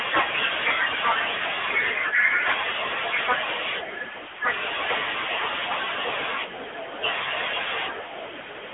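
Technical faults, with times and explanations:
Throughout: AMR narrowband mobile codec. The sound is thin, boxed in and plainly buzzy and synthetic, with nothing above 3.8 kHz and a band of roughly 250 Hz to 3.5 kHz. The mobile speech codec rebuilds the voice from a compact vocal-tract model, and the plainly audible damage fits a bitrate near 10 kbps.
0.68–0.70 s: Microphone overload. A brief harsh, crackly edge hits the peak, where the signal pushes about 3 dB past the converter's limit and a small fraction of samples are flattened. The likely cause is input gain set too high, so the converter clipped the waveform's tops.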